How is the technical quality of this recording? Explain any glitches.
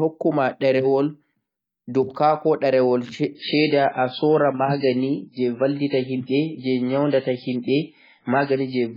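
The recording has one glitch: the adaptive stream drops to a lower bitrate partway through. At 3.35 s the quality changes suddenly and stays degraded to the end. There is no gap or dropout. The player switched to a cheaper version of the stream, likely because the connection slowed. Above that point nothing reaches past about 5.3 kHz. The speech turns dull, with swirly codec artefacts. This fits a fall from about 128 kbit/s MP3 to a much lower rate near 16 kbit/s.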